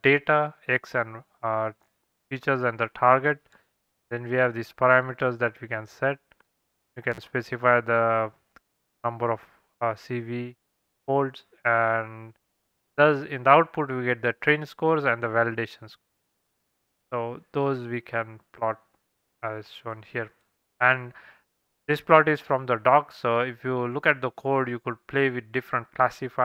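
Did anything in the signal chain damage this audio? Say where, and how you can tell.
Yes. At about 7.12 s the sound drops out abruptly for roughly 48 ms, with a short crackle on the way out and again as it returns at 7.18 s, and only faint hiss in the gap. That points to an intermittent contact in the analogue wiring: a loose plug or cable briefly broke the connection, so the signal vanished instead of fading, and the scraping of the contact as it opened and closed produced the crackle at each edge.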